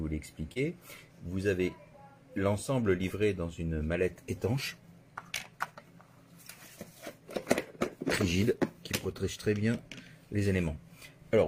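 At 0.53 s, running to 0.58 s, there is a short concealed packet loss. About 20 ms of audio never reached the decoder in time. The receiver bridged the gap by extending the sound that came just before, carrying it on for about 22 ms. It then blended back into the real signal. The result is a brief smear in the sound, lasting only a few hundredths of a second, where the original detail is missing.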